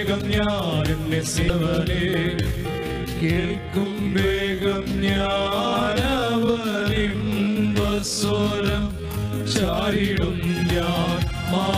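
Around 1.47 to 1.50 s there's a brief glitch, the sign of damaged data in a compressed stream: the decoder loses sync. From 2.36 to 9.78 s the pace drops to about 0.58x while pitch holds, sounding dragged, likely a time-stretched section padding the audio out.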